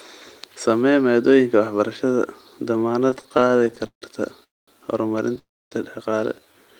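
Repeated stalls (stutter) run from 3.07 to 4.04 s: the incoming audio kept falling behind playback, so the receiver padded 22 short gaps by stretching the preceding sound, the longest 155 ms. Roughly 363 ms, about 38% of that stretch, is filler, so the speech drags and stutters without losing anything.

Call audio freezes follow at 4.44 to 4.69 s and 5.39 to 5.73 s. The last sound is briefly held, then drops to silence for about 210 ms and 260 ms respectively. The speech resumes where it stopped, likely because packets were held up on the way and the jitter buffer ran empty.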